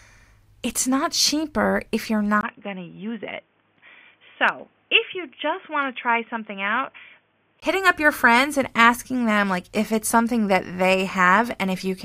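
From 2.41 to 7.62 s, after "not cheaper if you're", a 20 ms gap, then boxy, slightly quieter sound with nothing above 3.5 kHz: likely an input switched to a poorer device.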